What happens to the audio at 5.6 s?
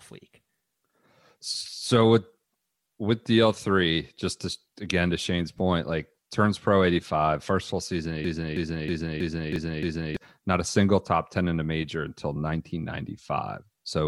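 At 5.58 s, an overlap between stream segments occurs: two segments' time stamps overlapped, so the player trimmed about 6 ms of speech that was never duplicated. The waveform jumps there, heard as a brief click or tiny skip just before "like turns pro".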